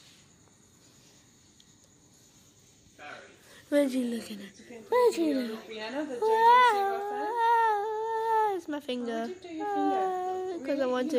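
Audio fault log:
No technical fault can be heard, and the signal stays continuous across the whole clip.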